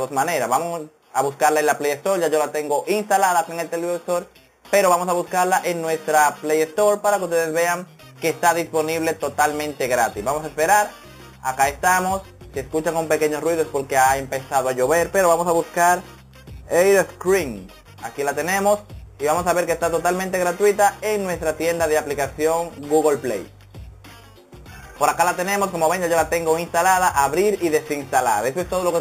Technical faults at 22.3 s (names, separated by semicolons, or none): imaging from sample-and-hold upsampling